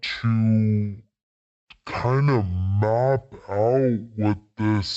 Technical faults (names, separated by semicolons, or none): stereo read as mono